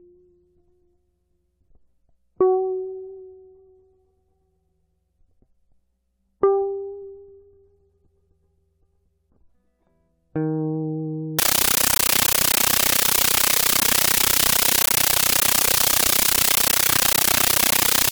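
Music plays normally until 11.39 s, then through to the end at 18.12 s it becomes a compressed stream played as audio: AC-3 data treated as raw samples, heard as very loud static chattering 31.25 times a second, each 13.3 ms burst followed by silent padding. That strict burst-and-gap rhythm, which fits a 640 kbps stream, sets it apart from random digital noise or clipping.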